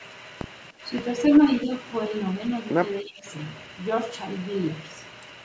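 Speech suppressed in double talk at 0.71 to 0.84 s, 1.65 to 1.70 s and 3.03 to 3.25 s: the talker dips by up to about 15 dB, likely because the echo canceller could not separate the talker from the overlapping loudspeaker echo.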